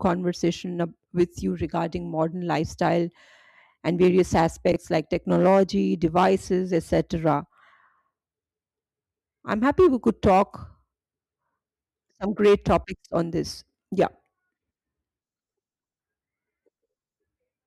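At 4.72 to 4.76 s, between "and various" and "like technology devices", the speech has chunks out of order: one 20 ms chunk arrives a single chunk late and plays after its successor. Nothing is lost, but the swap creates three hard joins, heard as a brief jumbled stutter.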